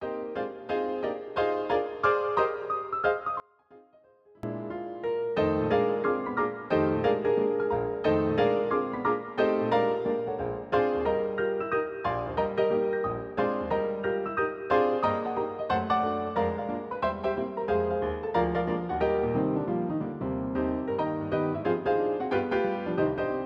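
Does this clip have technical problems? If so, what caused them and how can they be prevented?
Yes. From 3.40 to 4.43 s the sound suddenly drops by about 25 dB and turns faint, then snaps back. That's most likely one channel inverted: with one side's polarity flipped, everything the two channels share cancels when they're folded to mono, so only the small left-right difference gets through. To prevent it, check polarity on each channel and monitor a mono fold-down before bouncing.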